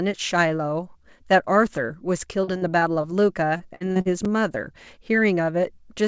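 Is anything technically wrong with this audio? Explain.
Yes, there are two kinds of problem in this speech clip.

First, repeated packet loss (robotic sound) in two stretches: 2.44 to 3.05 s, with four gaps of up to 39 ms and about 18% of the span patched over, then 3.57 to 4.07 s, with five gaps of up to 50 ms and about a third patched. Each hole gets filled by stretching the last bit of sound, so the speech turns choppy there, with pieces missing.

Second, a block of digital silence at 4.25 s, just 5 ms long. The sound cuts out and back with no fade, so what you hear is a quick tick or click rather than an audible hole.

Nothing comes through above 8 kHz, which fits a G.722 call path running at 64 kbps.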